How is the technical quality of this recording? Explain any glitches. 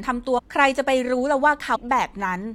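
Two brief glitches break up the speech, both from damaged data in a compressed stream. At 0.37 to 0.40 s and again at 1.74 to 1.77 s, corrupted bytes in the encoded file garble the frames there. The decoder misreads them, loses its place in the bitstream and hunts for the next valid frame header. Each event lasts about 22 ms and is heard as a short chirp or squawk cutting across the speech.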